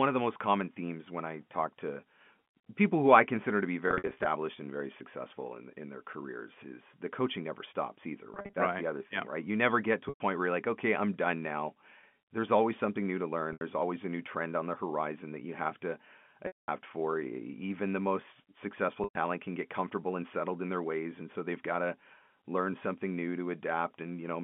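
Packet loss with pitch repetition breaks the telephone-band speech six times: 3.88–4.26 s, between "I consider to be" and "and very successful in"; 8.34–8.56 s; 10.09–10.20 s; 13.53–13.61 s, between "always something new to" and "always a new trend"; 16.47–16.68 s, after "that you have to"; and 19.04–19.15 s. Lost packets, 80 to 220 ms per event, were patched by looping the last pitch cycle, producing a brief held buzz on short gaps, while longer gaps fade into silence before the speech returns with a short cross-fade.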